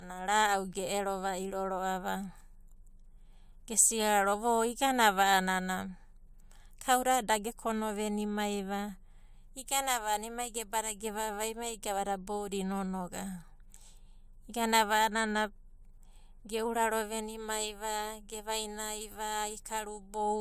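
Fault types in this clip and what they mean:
No technical faults can be heard anywhere in the recorded speech, and the signal stays steady and intact throughout.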